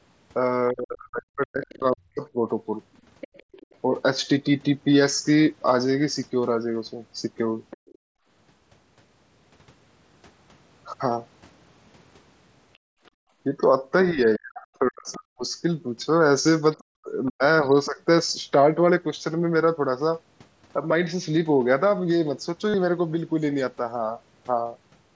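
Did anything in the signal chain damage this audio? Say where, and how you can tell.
Yes. At the call-processing stage, speech suppressed in double talk shows up from 0.71 to 2.35 s and from 14.11 to 17.98 s. The voice dips in pieces by roughly 35 to 40 dB while a second voice overlaps. The likely cause is the echo canceller mistaking near-end speech for echo and attenuating both.

The other side's voice leaking through is audible at 1.64–3.76 s, 7.70–7.98 s, 15.12–15.16 s and 16.73–17.86 s. It is a faint second voice, roughly 20 to 35 dB under the talker. This is likely loudspeaker echo that the canceller left incompletely removed from the microphone signal.

Background gated by the echo canceller appears from 7.77 to 8.27 s and from 12.78 to 13.38 s. The room sound drops by about 30 dB for roughly half a second and then returns. The canceller clamps the microphone while the loudspeaker plays and releases it afterwards.

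Concealed Bluetooth headset packet loss occurs on the headset link at 16.41–16.46 s and 22.69–22.74 s. Each event is a held, buzzy stretch of about 40 ms with a slight warble on recovery, which points to a short run of lost frames. The receiver repeated a recent waveform segment to fill each gap.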